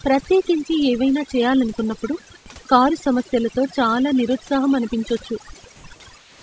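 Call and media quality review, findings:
Overdone noise removal, whole clip: background dropped and broken into twinkly specks. Suppressor set too hard, zeroing bands near its noise estimate and taking quiet bits of speech with them. Room noise was only about 31 dB down.

Comfort noise in place of the background, 5.76–5.84 s right after "సమస్యలతో చాలా నిరుత్సాహం అనిపించొచ్చు", and 6.18–6.42 s: real background swapped for flat, featureless hiss, same level the first time, about 4 dB quieter the second. Likely sender DTX, with the receiver filling the pause with synthetic noise.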